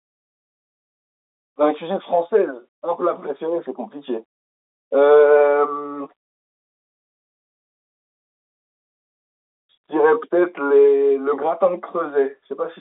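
No faults are audible anywhere in this speech recording.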